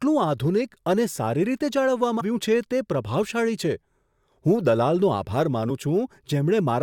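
Damaged data in a compressed stream at 2.20 s and 5.70 s of this speech: corrupted frames knock the decoder out of sync, giving blips.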